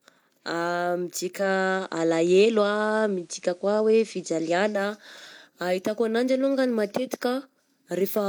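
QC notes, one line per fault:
1.35–4.83 s, digital radio blending to analogue: digital signal lost, a 158 ms cross-fade to FM shifts level about 2 dB, and adds faint hiss.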